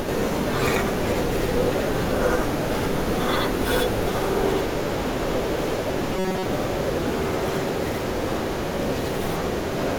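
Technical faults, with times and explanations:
throughout, channel delay (doubling): one channel runs about 85.3 ms late, which fits a 4096-sample buffer. Summed to mono, the speech has a same-level slap echo.
6.14 to 6.46 s, robotic sound from repeated short buffers: the speech becomes a rigid metallic buzz near 188 Hz. Most of this stretch is likely repeated short buffers.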